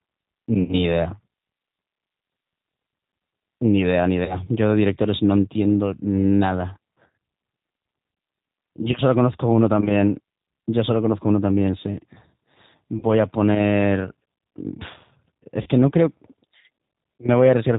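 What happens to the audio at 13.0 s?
From 12.99 to 13.04 s, VoIP packet loss concealment fills a roughly 40 ms gap, consistent with two lost packets. The decoder extends its last pitch and filter with falling gain, giving a brief buzzy tone or coloured noise that fades; on a spectrogram, the last spectrum smears flat and dims. Throughout, the G.729 codec leaves the speech slightly rough and synthetic, with the spectrogram empty above 4 kHz.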